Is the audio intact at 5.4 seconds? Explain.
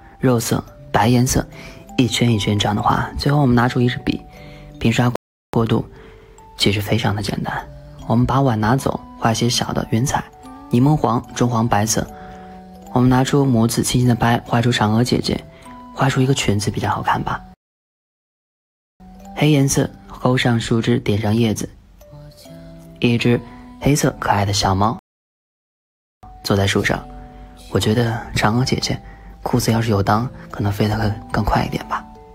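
No. At 5.4 seconds the playback is inside a rebuffering stall running from 5.16 to 5.54 s: the player drained its store of downloaded audio and had to halt until more data came in. The sound drops abruptly to silence for about 0.38 s, then picks up exactly where it left off. Nothing is skipped or repeated; the gap simply inserts roughly 378 ms of dead air into the timeline.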